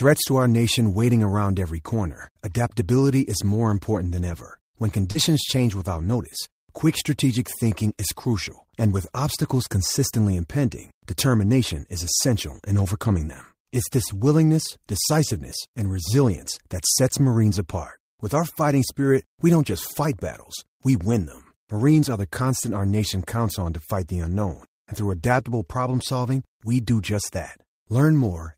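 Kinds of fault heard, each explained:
Short concealed packet loss: About 40 ms of the call failed to reach the decoder in time, from 5.11 to 5.17 s, just before "change without notice quick". The receiver covered roughly 33 ms of it by extending the preceding sound, then blended back into the real signal. The result is a brief smear or wobble rather than a clean gap. Part of this stretch was also recovered from the error-correction copy described below.
Lost packet rebuilt from error correction: Twice, a single packet went missing, but the next packet carried a low-bitrate copy of it. The decoder played that copy, so nothing drops out. Each rebuilt stretch lasts 20 ms and sounds rougher and noisier than its surroundings. The first is at 5.15 s, inside the concealed loss before "change without notice quick". The second is at 22.45 s, just before "our nation counts on".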